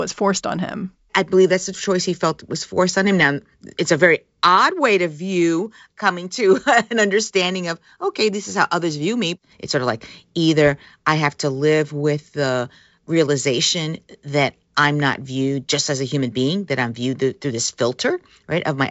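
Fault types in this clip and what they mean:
No faults found; the speech comes through a G.722 wideband telephone path at 64 kbit/s, with a faint upper-band hiss at most and nothing above about 7.7 kHz.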